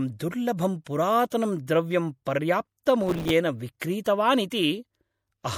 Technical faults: MP3 compression; processor overload crackle

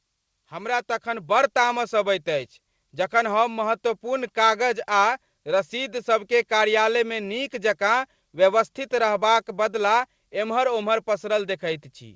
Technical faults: automatic gain rising

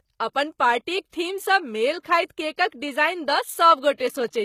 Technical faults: HE-AAC compression; pre-echo

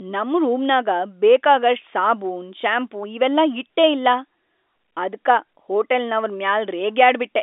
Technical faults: none

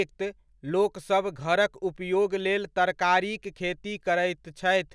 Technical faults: none

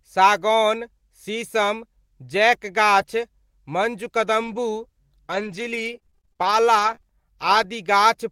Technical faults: lost packet rebuilt from error correction; repeated packet loss (robotic sound)

